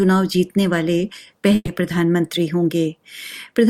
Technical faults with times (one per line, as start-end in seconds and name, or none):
1.55-1.69 burst of packet loss